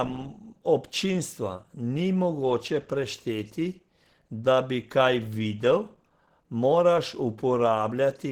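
Across the whole speech clip, the likely cause is Opus compression at a very low bitrate, around 16 kbps, with the encoder in its hybrid speech mode. The bandwidth stays wide, reaching about 20.2 kHz, but the voice sounds plainly hoarse and muffled.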